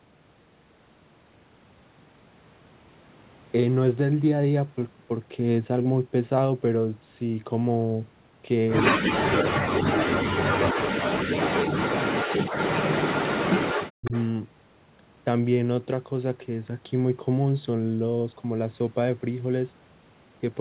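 At 8.86 to 8.90 s, a far-end echo canceller likely missed part of its loudspeaker pickup, so an echo leak returns a 160 ms delayed copy of the speech only about 5 dB below it. From 8.92 to 12.38 s, then 13.02 to 13.58 s and 13.74 to 14.13 s, the canceller likely treated double talk as echo and turned both its own talker and the echo down. Here speech is suppressed in double talk, dropping deeply, by as much as about 40 dB. A second, fainter echo leak follows at 14.05 to 14.25 s, again delayed 160 ms and about 20 dB down.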